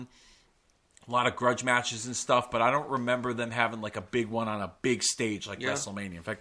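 No technical faults are audible.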